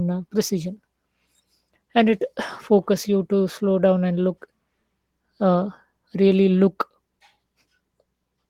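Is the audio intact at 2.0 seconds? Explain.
Yes, the speech at 2.0 seconds is intact, with no dropout, click, distortion or other fault to be heard at that point.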